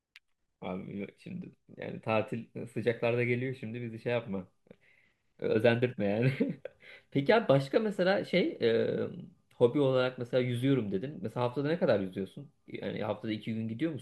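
No technical faults can be heard anywhere in the speech. There are no moments in the recording that need a time or a value pointed out.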